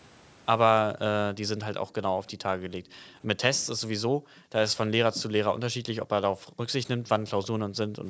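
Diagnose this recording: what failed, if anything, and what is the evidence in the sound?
Call processing failed: background gated by the echo canceller. The room sound ducks at 1.83, 2.78, 4.08, 5.71, 6.3, 6.98 and 7.57 s, by about 19 to 40 dB for 0.1 to 0.44 s, as the canceller clamps the microphone during loudspeaker playback. Unlike packet loss, which cuts out everything, only the room sound dips, and it returns when the canceller lets go.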